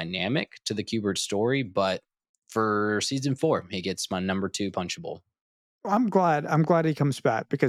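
At about 5.97 s the speech jumps, a tiny skip where roughly 19 ms of sound goes missing. This is an overlap between stream segments: two adjacent pieces claimed the same stretch of time, and the player trimmed real audio, leaving a discontinuity in the waveform at the join.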